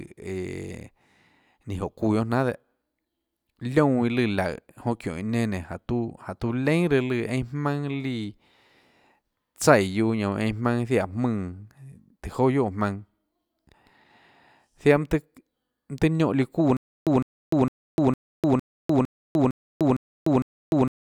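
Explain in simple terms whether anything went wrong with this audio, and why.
Stutter with silent gaps from 16.77 s to the end: a 0.16 s speech fragment repeats nine times between 0.3 s silences, likely from a stalled stream.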